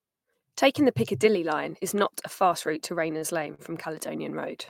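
Just after "a fast route to", sound hangs slightly at 3.17 to 3.23 s, and again at 3.54 to 3.60 s: short stalls from a late packet, about 40 ms stretched each time while the jitter buffer waited.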